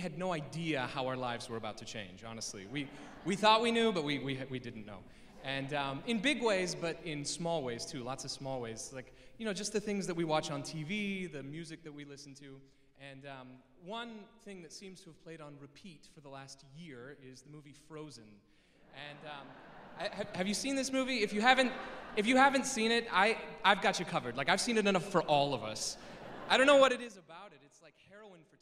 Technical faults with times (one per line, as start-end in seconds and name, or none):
26.84-27.20 zipper noise